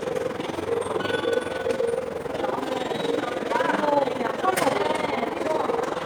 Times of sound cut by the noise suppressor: none

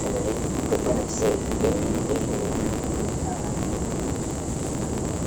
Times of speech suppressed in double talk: none

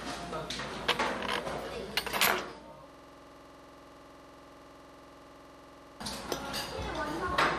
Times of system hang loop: 2.90-6.00

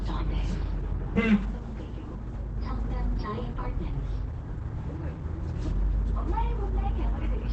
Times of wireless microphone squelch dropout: none

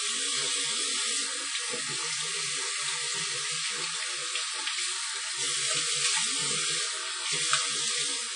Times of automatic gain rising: none

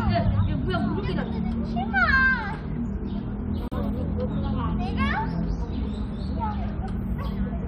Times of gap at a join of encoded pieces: 3.68-3.72

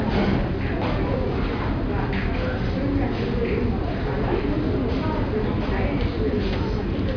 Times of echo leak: none

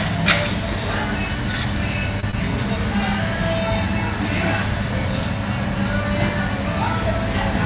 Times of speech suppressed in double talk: none

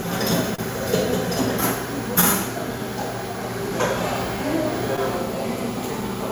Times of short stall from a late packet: 0.55-0.61

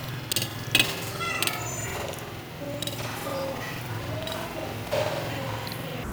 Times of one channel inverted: none

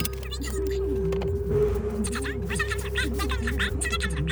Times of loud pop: none

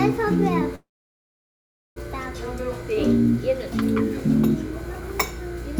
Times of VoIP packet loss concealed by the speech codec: none

